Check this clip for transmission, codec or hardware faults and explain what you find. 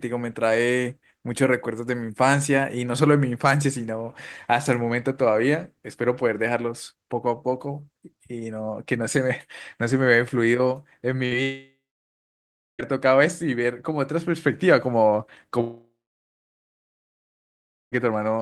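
There are three faults, all late in the speech and all from the network. One is a short burst of packet loss. Two longer gaps are most likely network dropouts.

At 11.25 to 11.33 s there is a burst of packet loss. About 60 ms of audio never arrived. The receiver stretched the last sound across the hole and faded it, which gives a brief buzz or hiss. The speech then picks up slightly further on, with that piece missing.

From 11.43 to 12.81 s, and again from 15.61 to 17.94 s, the audio cuts out. Each gap was likely a long network dropout. In each, the receiver carried the last sound forward for roughly a third of a second, and it fades as a buzz or hiss. Silence follows, about 1.03 s in the first gap and about 2.01 s in the second. The speech then returns without the lost stretch, about 1.36 s and 2.32 s of it.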